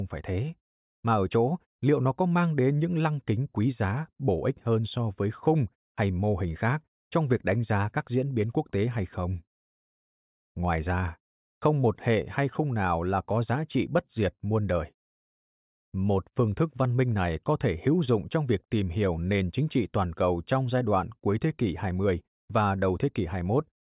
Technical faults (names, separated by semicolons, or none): none